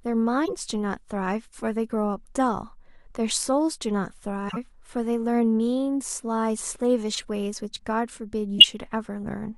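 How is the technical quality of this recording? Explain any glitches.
Corrupt frame decoded, four times in the speech: 0.45–0.53 s, 4.49–4.57 s, 7.12–7.25 s and 8.58–8.65 s. Damaged compressed frames were played anyway, scattering energy into wrong frequencies as brief chirpy noise bursts, spanning a few frames each (the 7.12 s one longest), and the last bursting much louder than the others.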